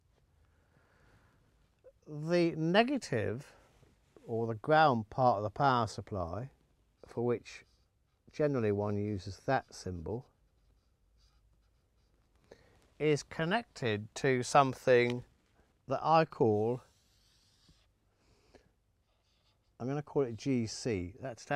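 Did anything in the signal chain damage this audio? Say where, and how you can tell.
No, nothing along the chain audibly damaged this audio, and the signal holds steady with no sign of trouble at any stage.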